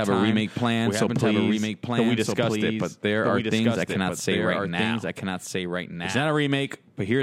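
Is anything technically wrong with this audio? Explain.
Yes. A doubled audio track runs through the whole speech clip. A second, full-band copy of the speech trails the original by roughly one and a half seconds. It sits somewhat quieter, around 5 dB down. It carries no decay or room colour, so it sounds like a detached repeat rather than an echo. The likely cause is the signal being captured twice, once through a slower path.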